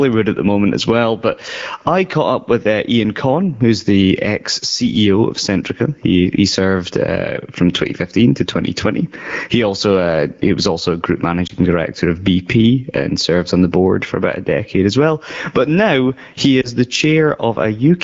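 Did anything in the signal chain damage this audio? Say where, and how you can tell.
Yes. Gain pumping runs through all 18 seconds at the call-processing stage. The gain pulls down on each loud sound, a swing of around 20 dB. This is likely caused by input gain set far too high, with a fast limiter clamping every peak and squashing the dynamics.

Lost AMR speech frames, a network fault, show up at 11.47 to 11.52 s, just before "director of", and at 16.61 to 16.71 s, just after "now he". Each is a brief dip or warble that fits one lost 20 ms frame. The AMR-WB decoder patched each gap by replaying the last good parameters at falling gain.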